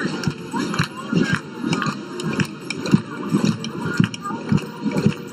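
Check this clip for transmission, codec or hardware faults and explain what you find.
One fault is present. Channel delay (comb filtering) runs throughout. One channel lags roughly 0.7 ms. Mono summing cancels evenly spaced frequencies from around 700 Hz, sounding hollow and phasey.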